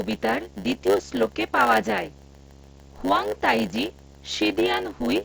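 A steady low buzz at 75 Hz, with a fizz of hash above it, sits roughly 25 dB under the speech for the whole clip. This is video or display buzz: a screen or its cable is coupling into the audio path at the picture's field rate.

Running alongside it is a second buzz at 100 Hz, and the speech sounds slightly dragged, about 8% slow (0.919 times normal speed) yet close to its natural pitch. This is a block size mismatch (padded): each block arrives short and is filled out with zeros, and those silent gaps repeat at the block rate.

From 3.71 to 3.73 s, a brief held, buzzy fragment replaces the sound, then a slight warble as normal audio resumes. This is concealed Bluetooth headset packet loss. About 15 ms of audio went missing between headset and phone, which points to two lost frames, and the receiver patched the gap by repeating the closest-matching recent waveform. The mSBC wideband link carrying all of this passes the speech up to 8 kHz.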